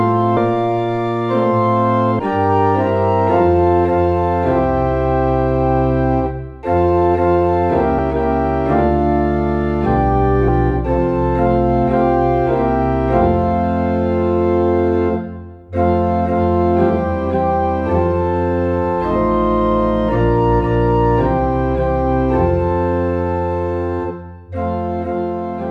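Whole compressed frames were skipped three times, missing from the file or rejected by the decoder as damaged, so playback jumps forward. At 0.37 s about a fifth of a second of sound vanishes, and at 2.19 s and 10.48 s roughly 150 ms each. The jumps fit a 32 ms frame length.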